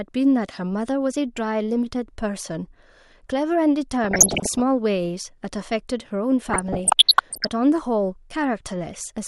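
DAB burbling breaks into the speech three times: from 4.04 to 4.60 s, from 6.49 to 7.49 s, and from 8.92 to 9.08 s. Weak reception lets bit errors slip past error correction into the MP2 data. Corrupted samples then put short blips of noise into single sub-bands, and corrupted scale factors throw sub-bands up or down in level for up to a frame. The result is burbling over the speech. It is densest in the first burst, with roughly 1 percent of bits wrong there.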